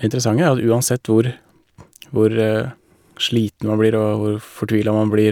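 No technical faults occur at any point in this speech.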